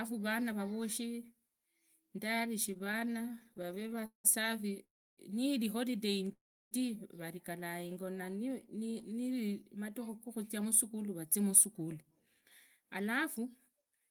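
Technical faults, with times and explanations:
2.71–4.26 s, repeated stalls (stutter): about thirty brief stalls, longest 182 ms, are bridged by continuing the last sound, so the audio drags and stutters while nothing is lost.
4.84–5.19 s and 6.32–6.73 s, call audio freeze: the sound halts, the held sound fades to about 0.3 s of silence, then resumes where it stopped, likely from packets held up in transit.
7.88–9.21 s, jitter buffer slow-down: repeated pitch periods add 129 ms to rebuild the buffer, so the audio runs at 91% speed with unchanged pitch and drawn-out sounds.
10.58–14.08 s, jitter buffer speed-up: around 0.3 s of short pitch-period pieces are cut to reduce excess delay, so the audio runs at 108% speed, sounding hurried at the same pitch.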